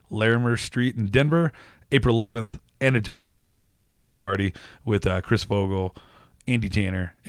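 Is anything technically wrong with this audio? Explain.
Yes, the speech is interrupted three times by network faults.

Long network dropouts, at 2.17 to 2.38 s and 3.07 to 4.30 s, are likely cases of the stream stopping entirely so that the receiver had to bridge the hole itself. In the first, about 180 ms of speech is lost and covered by a stretched, fading continuation of the last sound. In the second, roughly 1.2 s is gone, heard as a fading continuation of the last sound decaying into about 0.2 s of silence before speech returns at "with uh".

A burst of packet loss at 2.41 to 2.56 s, just after the first dropout, removes about 120 ms. The receiver holds the preceding sound and turns it down across the gap, so a short smeared buzz or hiss replaces the missing audio and speech then jumps ahead.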